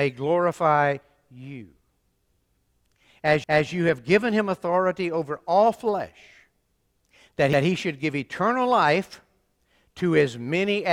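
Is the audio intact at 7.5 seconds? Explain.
No, a CD skip at 7.53 s breaks the audio just before "he should give eternal." A knock or a flaw on the disc made the laser leave its track and land on a different turn of the spiral. The player mutes for only a few milliseconds, then resumes from that other point on the disc. The result is a small tick, and the speech jumps abruptly instead of flowing continuously into the following phrase.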